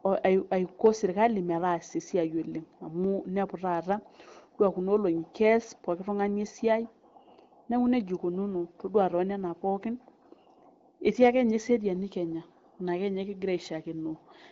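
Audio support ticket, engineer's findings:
No faults found.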